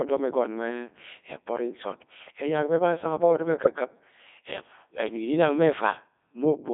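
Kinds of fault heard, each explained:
Codec 2 vocoder: The speech is rebuilt from sine waves rather than kept as a waveform, carrying only pitch, voicing, level and spectral shape at 3.2 kbit/s. So it sounds robotic and buzzy all the way through, heavily mangled, squeezed into roughly 250 Hz to 3.6 kHz.
Bit errors on digital voice radio: Around 3.64 to 3.76 s the synthetic voice briefly lurches in pitch, level and tone colour, a warbly glitch. That fits flipped bits, maybe a few percent of them, corrupting about three vocoder frames, each carrying a whole frame's parameters.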